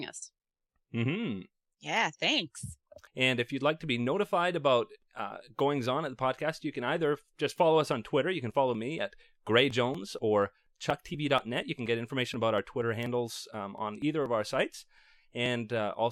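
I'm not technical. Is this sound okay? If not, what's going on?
No. From about 8.51 s to 15.94 s there are periodic USB or driver dropouts: roughly every 0.24 s, something on the computer briefly stalls the audio, and about 10 ms of speech gets skipped. That's the steady ticking you hear, around thirty ticks in all.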